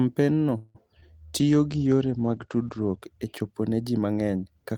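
From 0.57 to 0.77 s the speech stalls for about 0.19 s while the last sound is stretched into a fading buzz with no silence, and then resumes where it left off. This is a call audio freeze, likely caused by delayed packets draining the jitter buffer. Unlike packet loss, nothing is dropped, only delayed.

At 1.01 to 1.04 s comes a short concealed packet loss, a quick smear lasting about 30 ms. Only the first third is filled by extrapolating the preceding sound; the rest is simply lost. That loss of content separates it from the freeze.

From 1.40 to 3.10 s a call bitrate drop takes the encoder from 32 to 13 kbps, and the bandwidth falls from 20 kHz to 8 kHz. For about 1.6 s the speech sounds muffled and watery, without gaps, until clarity returns just before "e chopo ne ji".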